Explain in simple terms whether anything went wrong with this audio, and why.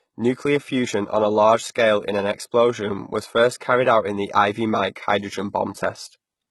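Yes, something went wrong, and it lasts the whole clip. The s sounds come out gritty and metallic. The treble sounds bright but fake. That points to heavy HE-AAC compression as the likely cause, which rebuilds the highs from copies of lower frequencies.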